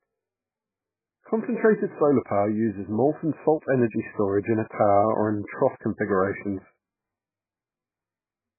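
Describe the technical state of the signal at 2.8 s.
At 2.8 s the speech carries heavy damage that fits MP3 compression, and it runs through the whole clip. Nothing remains above 2.5 kHz, so the sound is dull and muffled. The encoder likely ran very short of bits, which points to a bitrate near 8 kbps. It cut the treble at a fixed point and dropped weak frequency lines. Those lines flicker between frames, giving a watery, swirling texture and smeared attacks.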